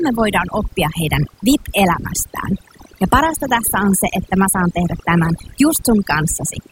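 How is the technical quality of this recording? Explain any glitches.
The recording suffers from overdone noise removal throughout the speech: an aggressive noise reducer cut frequency bands near its noise estimate, leaving near-silent gaps with twinkling specks and quiet parts of the voice cut away.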